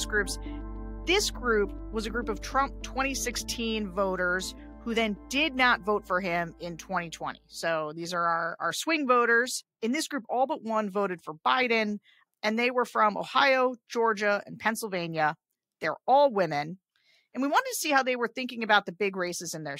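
No technical faults can be heard anywhere in this audio. Nothing in it calls for a time stamp or an explanation.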